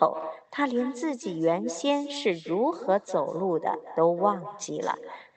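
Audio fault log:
Throughout, echo with no canceller: the speech loops back through the far-end loudspeaker about a fifth of a second later, about 14 dB down, as a quieter, thinner copy.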